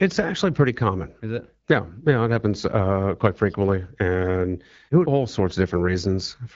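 There are no technical faults in this speech clip to describe in time order.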